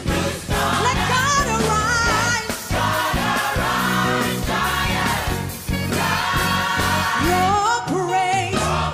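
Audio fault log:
Nothing to flag here; I listened all the way through and didn't hear a single problem worth logging.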